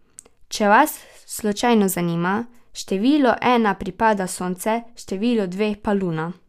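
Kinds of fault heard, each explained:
No faults are audible anywhere in this speech recording.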